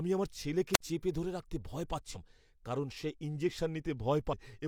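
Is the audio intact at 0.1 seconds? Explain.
Yes, the speech at 0.1 seconds is intact, with no audible fault at that moment.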